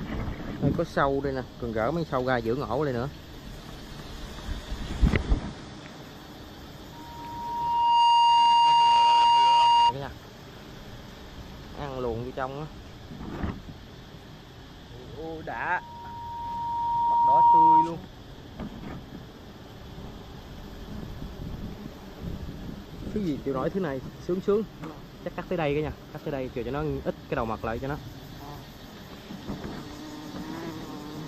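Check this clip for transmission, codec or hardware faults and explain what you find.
Loudspeaker feedback squeal appears twice, from 6.92 to 9.94 s and from 15.75 to 17.95 s. Each time a 941 Hz tone swells over a second or so to roughly 15 dB above the rest of the sound. A microphone was picking up its own loudspeaker, and the loop gain exceeded one at that frequency.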